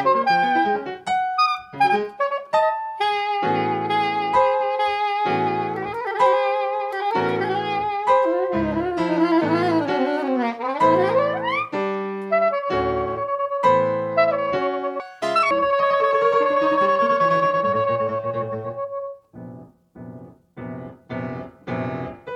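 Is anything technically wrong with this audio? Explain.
Yes, there's one problem. From about 15.00 to 15.51 s the audio gets read two samples at a time, so for that half second it plays at double speed (2x) and jumps up an octave. The reader is treating each pair of samples as a single frame, as if the stream had two channels or samples twice as wide, so it races through the material.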